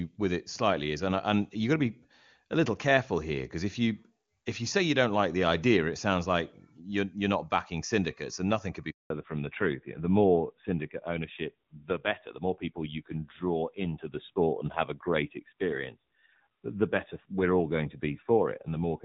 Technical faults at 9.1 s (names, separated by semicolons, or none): handover gap; fallback to narrowband